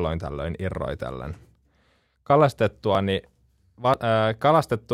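At 2.95 s and again at 3.94 s the speech skips slightly, about fifteen milliseconds gone, with no silence. That's likely audio missing between one-second chunks.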